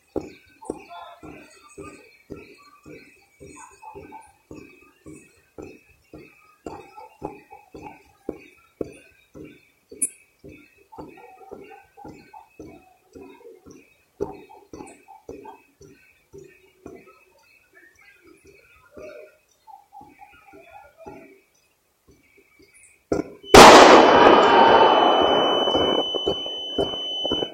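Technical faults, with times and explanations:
23.41 to 27.53 s, feedback whistle: a thin, steady tone around 3 kHz sits well under the main sound right to the end, wobbling a little in level. It's likely a speaker-to-mic loop hovering right at the edge of feedback, ringing on one frequency without running away.
23.54 to 24.62 s, hard clipping: for about a second the signal is driven about 18 dB past what the stage can pass, so the peaks get sliced flat. Those squared-off tops spray harmonics high up the spectrum, which turns every loud moment into harsh fuzz.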